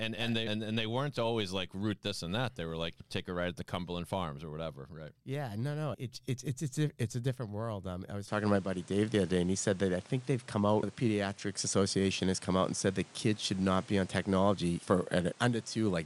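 From 8.28 s, right after "I was", the speech abruptly loses its top end, with nothing above 10.9 kHz, shifts in level and gains a faint new background noise, with no gap at the change. The likely cause is an input switched to a poorer device.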